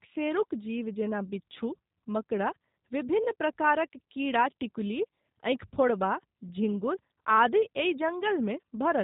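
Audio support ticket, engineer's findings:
G.729 codec damage throughout the speech, plainly audible: rough, slightly synthetic, buzzy texture, consistent with G.729A at 8 kbit/s. Spectrogram: flat ceiling at 4 kHz, empty above. Mechanism: sparse pulse excitation per 5 ms subframe plus pitch predictor, shaped by a vocal tract filter.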